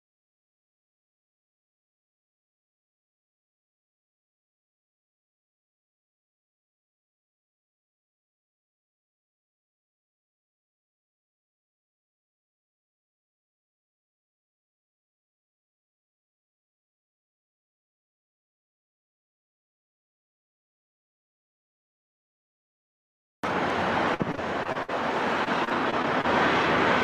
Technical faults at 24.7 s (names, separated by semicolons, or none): repeated packet loss (robotic sound)